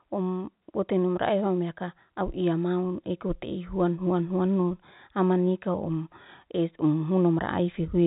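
Nothing here needs flagging, just ordinary speech carried over G.711 telephone coding, with the usual narrow telephone band that leaves nothing above about 3.8 kHz.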